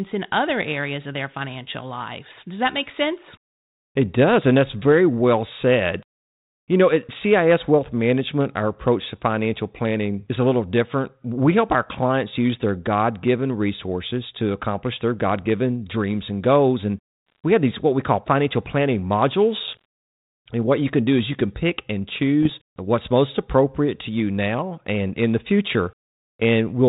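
A speech clip carried over G.726 ADPCM at 32 kbit/s, limited to below 4 kHz, is hit by bit errors on an ADPCM link at 17.28 to 17.39 s (just before "we have these what"), at 19.64 to 19.85 s, and at 22.43 to 22.54 s (between "you can pick and" and "what's most appropriate to"). At an error rate of around one percent or less, the flipped bits throw the decoder's step size and predictor off track. Each hit rings on as pops and a rough burst with brief level jumps.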